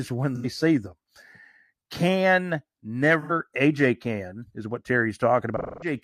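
AAC frame loss with concealment hits at 0.35 s, just before "see them", and again at 3.21 s. Each gap lasts about 85 ms, which fits two lost frames. The decoder reuses the last spectrum, leaving a smeared, noisy patch. At 5.57 s, a 256 ms loss decays toward silence before sound fades back.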